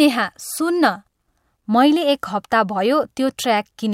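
Nothing in this speech recording stands out as a technical fault, so there's nothing to point to at any moment along the way.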